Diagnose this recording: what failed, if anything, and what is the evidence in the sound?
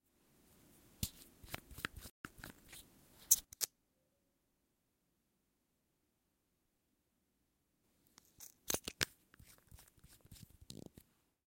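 A playback stall at 2.10 s cuts the sound to silence for 148 ms, until 2.25 s. The likely cause is a starved or blocked buffer in the player. The break is abrupt and comes in mid-flow, which separates it from a network-loss dropout.

Time-compressed catch-up follows from 2.25 to 2.83 s. The player drains its backlog by splicing out small pieces and cross-fading them, which runs the audio at 1.25 times speed. Pitch stays unchanged, ruling out a sample-rate mismatch.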